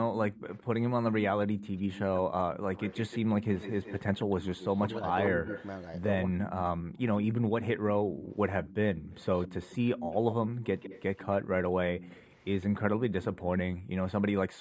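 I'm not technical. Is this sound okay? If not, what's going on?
No. Throughout, the sound is hollow and phasey. This is channel delay (comb filtering): one channel runs a tiny fraction of a millisecond late, and combining them cancels sound at evenly spaced pitches, the first around 5 kHz.

From 0.32 to 0.65 s, and again from 1.59 to 13.41 s, a faint repeat of the voice trails about 0.16 s behind. This is an echo leak: likely the other end's loudspeaker got back into their microphone.

Between 4.86 and 6.64 s, the voice dips briefly while both sides overlap. This is speech suppressed in double talk, likely the echo canceller turning everything down.

The room sound drops at 8.05 to 8.22 s, and again from 13.76 s to the end. This is background gated by the echo canceller, which briefly turned the microphone down hard.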